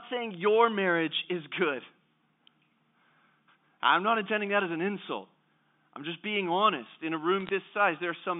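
From 7.40 to 7.49 s, bit errors on the digital phone line scatter sharp ticks across the speech. Each flipped bit in the G.711 stream spoils one sample, so unlike a packet dropout, the speech carries on unbroken beneath the crackle.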